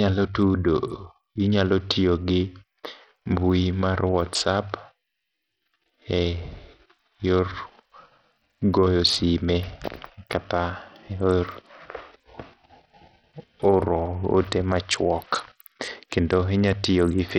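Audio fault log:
Throughout: Bluetooth SBC compression, likely the cause of heavily degraded speech with dull, flickering treble and a gritty, aliased haze. The damage points to a low bitrate near 64 kbps, where too few bits leave the upper sub-bands starved and the rest coarsely quantised.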